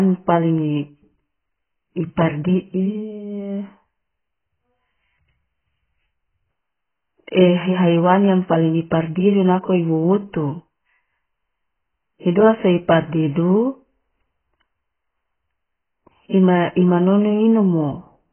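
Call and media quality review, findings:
Dull, smeared speech throughout, nothing above 3.1 kHz; warbling, fizzy texture on sibilants and held sounds. Likely AAC compression (AAC-LC) at a bitrate around 12 kbps: coarse quantisation leaves spectral holes. A plain band-limit would not warble; that marks heavy codec damage.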